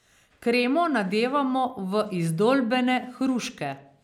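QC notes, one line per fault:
No faults found in the QC check.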